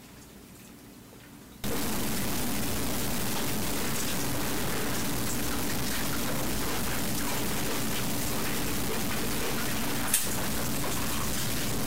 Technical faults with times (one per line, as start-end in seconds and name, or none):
1.64-11.87 low bit depth without dither